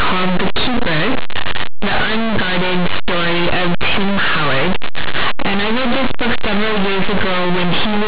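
Throughout, linear 8-bit audio read as mu-law companded throws samples just on one side of zero to the largest outputs, producing very loud, harsh distortion, a waveform dominated by large peaks, and a broadband spectrogram smear.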